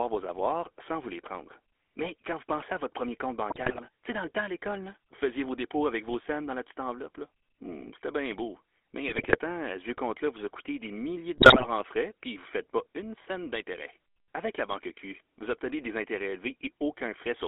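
Throughout, the GSM full-rate codec's pulse-driven vocal-tract model and 300 Hz to 3.4 kHz band give the speech a buzzy, gravelly, band-limited roughness, consistent with 13 kbps coding. GSM bit errors corrupt decoder parameters at 3.5 to 3.85 s, 9.08 to 9.38 s and 11.38 to 11.69 s, breaking the speech into squawks, pops and gargling.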